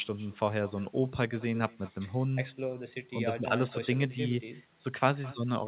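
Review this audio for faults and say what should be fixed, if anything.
Every phrase of the speech is trailed by a faint, thin copy of itself, arriving around a fifth of a second later and sitting about 24 dB below the direct sound, audible from start to end. This is echo with no canceller: the far end plays the call through a loudspeaker, its microphone picks that playback up, and nothing removes it, so the talker's own audio returns after the round trip through the 4 kHz-wide G.711 call path. Enabling acoustic echo cancellation on the far-end device, or having that participant use a headset, would prevent it.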